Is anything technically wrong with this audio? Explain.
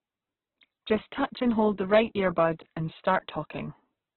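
Yes, there are two faults.

Throughout the clip, the speech is narrow and grainy, with nothing above about 4.1 kHz. The likely cause is heavy Opus compression in its music (CELT) mode at a very low bitrate, which fits around 8 kbps. With so few bits, the encoder keeps each band's overall energy but fills the detail with folded or noisy content, so tones turn rough and grainy. On a spectrogram, energy stops at a hard ceiling near 4.1 kHz, and the harmonic lines below look smeared and speckled rather than clean.

From 1.94 to 1.99 s, just after "and hold the", there is hard clipping. The signal overdrives a stage by about 4 dB, so the peaks that exceed the limit are sliced off flat. Those flat tops create harmonics far up the spectrum, heard here as a brief crackly burst. On the waveform, the peaks in that stretch sit pressed against a flat ceiling. On a spectrogram, a short vertical smear of broadband energy appears at that moment.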